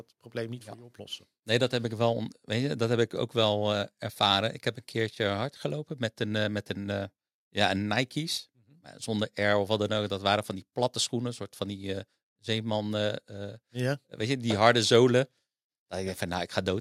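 Listening to the speech recording, nothing stood out as a technical problem at any point.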